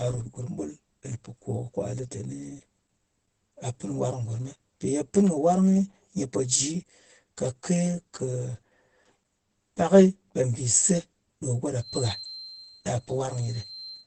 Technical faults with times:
0.00-14.06 channel delay (comb filtering)
0.00-14.06 Opus compression
11.77-14.06 feedback whistle

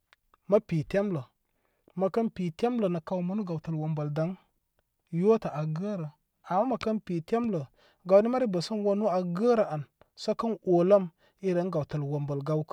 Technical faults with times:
none

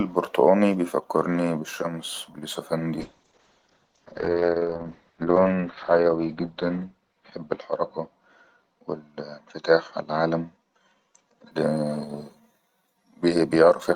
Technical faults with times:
3.01-11.57 call bitrate drop

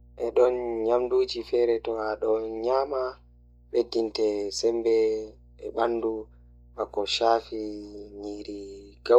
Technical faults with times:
0.00-9.19 mains hum

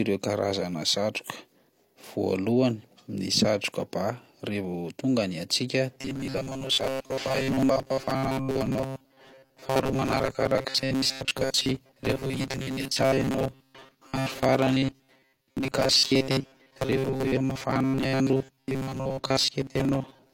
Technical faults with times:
5.95-20.33 robotic sound from repeated short buffers

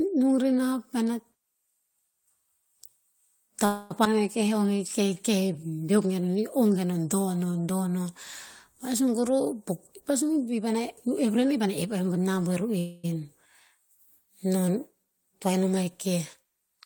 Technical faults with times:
3.65-3.92 call audio freeze
4.04-4.07 skip ahead
4.43-5.77 jitter buffer slow-down
9.08-9.61 jitter buffer speed-up
10.10-12.08 jitter buffer speed-up
12.79-13.05 call audio freeze

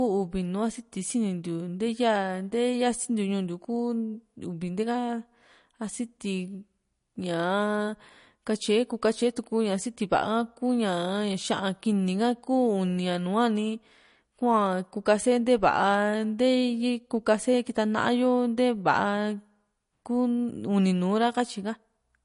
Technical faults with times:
0.00-22.24 MP3 compression

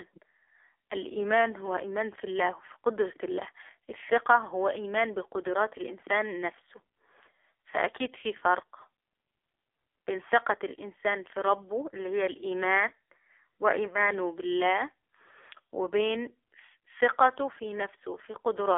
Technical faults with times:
0.00-18.77 AMR narrowband mobile codec

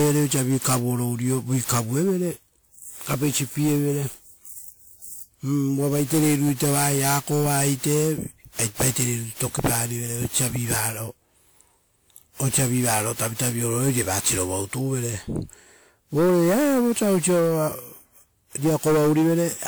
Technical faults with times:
0.00-19.67 generation loss

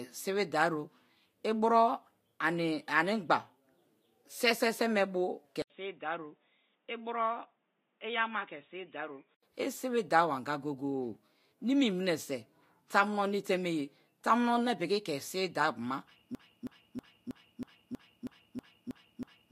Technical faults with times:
5.62-9.43 input switched to a poorer device
16.35-19.52 broken-record loop

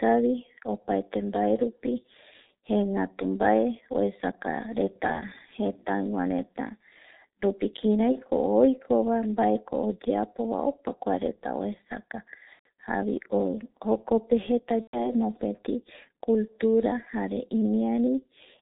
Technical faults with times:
0.00-18.61 G.723.1 codec
5.12-5.24 VoIP packet loss concealed by the speech codec
8.12-8.17 VoIP packet loss concealed by the speech codec
12.53-12.66 VoIP packet loss concealed by the speech codec
14.81-15.12 VoIP packet loss concealed by the speech codec

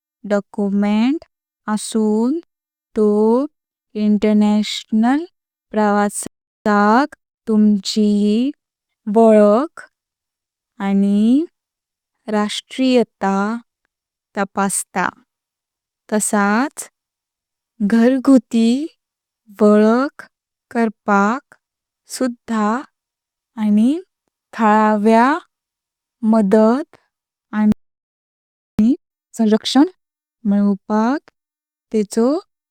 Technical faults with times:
6.27-6.66 playback stall
6.66-9.66 time-compressed catch-up
27.72-28.79 playback stall
28.79-29.85 time-compressed catch-up

